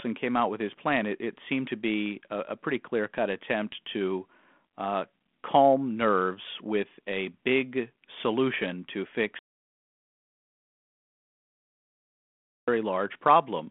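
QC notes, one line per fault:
9.39 to 12.68 s, audio dropout to silence: right after "a big solution to" the speech stops mid-flow and about 3.3 s of dead silence follows before it resumes at 12.68 s. The likely cause is a lost input, such as a disconnected device, a failed link or a mute, while recording continued. Unlike a level dip or a noise gate, the gap has no room tone, and the speech is simply cut off, not faded. Around the gap, the telephone-band character of the 32 kbit/s G.726 path, with nothing above about 3.8 kHz, stays the same.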